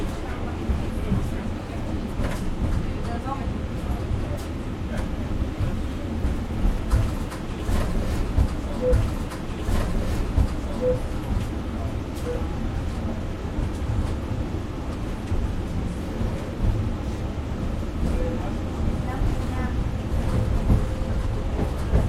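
At 8.92 s a stream segment is repeated: the player fetched or queued the same two-second chunk twice, so the audio jumps back and replays it until 10.92 s. A brief blip marks the jump. On a spectrogram the identical pattern appears twice, with a sharp vertical seam at the splice.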